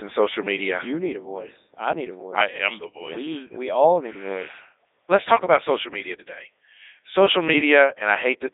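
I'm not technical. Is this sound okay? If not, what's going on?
No. A Codec 2 vocoder affects the whole recording. It keeps only a rough outline of the speech, its pitch, loudness and tone shape, then rebuilds the voice from simple tones. That makes it sound robotic and buzzy, with nothing above 3.7 kHz.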